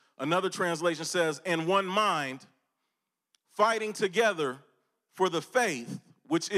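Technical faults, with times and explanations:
Nothing stood out on listening to this speech recording.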